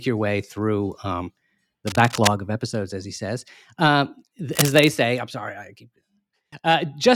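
Cable scratch noise appears from 1.87 to 2.29 s, just after "way through um the" and before "of episodes as he", and again from 4.51 to 4.90 s, after "as he says um" and before "say I'm sorry I". Each time, a dense, ragged rustle sits over the speech only slightly below it, about 5 dB down. The likely cause is a worn cable or connector being moved, its contact resistance fluctuating rapidly and injecting bursts of noise.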